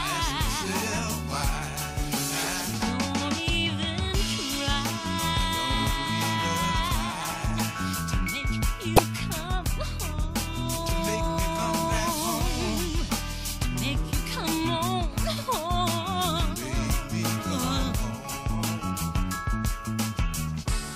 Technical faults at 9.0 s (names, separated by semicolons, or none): damaged data in a compressed stream